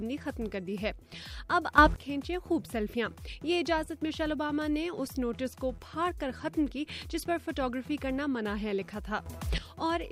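Sudden gain jumps at 1.78 to 1.96 s and 9.26 to 9.58 s lift sound and background noise together, by about 14 dB then about 12 dB, likely from digital gain switched without a ramp.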